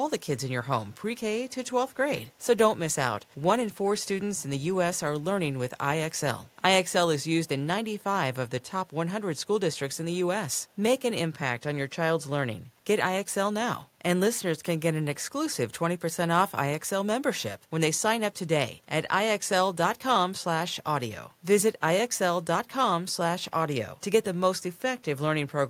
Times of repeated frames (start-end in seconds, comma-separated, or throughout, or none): none